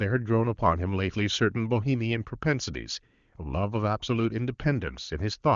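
No technical faults can be heard in this speech clip. The AMR wideband (HD Voice) codec path carries the audio with a band edge near 7 kHz and at most faint coding damage, which fits one of its higher bitrates.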